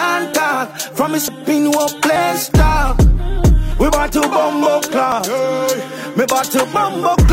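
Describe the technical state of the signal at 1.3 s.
At 1.28 s the audio skips forward, as roughly a tenth of a second is lost, likely a dropped buffer (overrun) where unread samples were overwritten. The waveform shows an abrupt splice without any gap, and the spectrogram a thin vertical broadband line.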